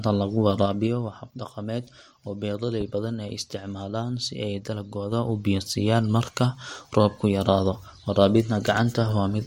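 From 0.56 to 1.2 s, zipper noise: the speech level drops about 10 dB in unsmoothed 3 dB steps, roughly five a second. Each step ticks and shows as a stair-step in the waveform envelope and a thin vertical line on the spectrogram. The same thing happens in reverse from 5.04 to 5.55 s as the level climbs about 10 dB. At 2.81 to 2.84 s a single loud pop, likely from a plug, switch, static or driver glitch, stands about 10 dB above the speech. It appears as a sharp waveform spike and a full-height spectrogram stripe.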